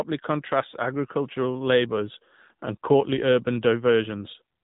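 From start to finish the speech has gone through the AMR narrowband mobile codec, with nothing above 3.8 kHz and a plainly buzzy, synthetic edge that fits the 7.4 kbps mode.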